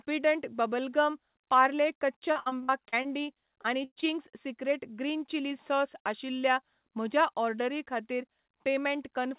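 Speech carried over a call path with nothing above 4 kHz, which fits a G.711 mu-law codec, suffers repeated packet loss (robotic sound) twice. From 2.32 to 3.06 s, just after "गम पार्ले कच्चा", and again from 3.62 to 4.05 s, packets kept going missing and each hole was patched by extending the preceding sound. This leaves roughly a third of each stretch choppy, with gaps up to 63 and 70 ms.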